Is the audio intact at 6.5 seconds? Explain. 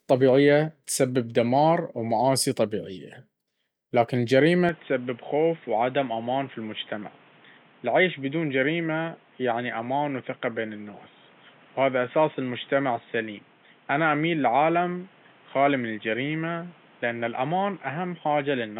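No. An input switched to a poorer device from 4.69 s, right after "لكن الجريمة", to the end. The input likely changed to a narrower-band microphone, so nothing passes above 3.8 kHz. The speech turns dull, drops about 5 dB, and carries a new noise floor, without any gap at the switch.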